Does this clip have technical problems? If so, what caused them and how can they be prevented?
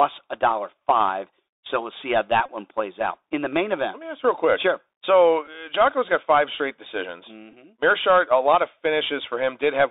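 Yes. The Bluetooth CVSD headset codec affects the whole clip. The speech is squeezed into a narrow telephone band of roughly 300 Hz to 3.7 kHz, which fits a 64 kbps CVSD link. Its one-bit adaptive step cannot keep up with loud high content, so s sounds turn scratchy and a granular hiss sits under the voice. Using a wideband headset profile (mSBC or LC3) instead of CVSD would prevent this.

The Bluetooth headset packet repeated fault occurs at 2.46–2.48 s, and briefly at 5.47 s and 7.52 s. When packets are lost, the headset replays the previous packet's bits. The 26 ms run at 2.46 s repeats every 3.75 ms, which gives a short buzz near 267 Hz. The later events are shorter runs of 7.5 ms and 11 ms. Keeping the phone close and clear of 2.4 GHz interference would prevent this.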